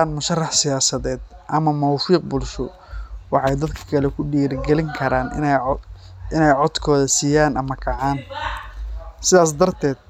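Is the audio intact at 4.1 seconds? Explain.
Yes, at 4.1 seconds the speech runs intact, with no dropout, click, distortion or other fault at that moment.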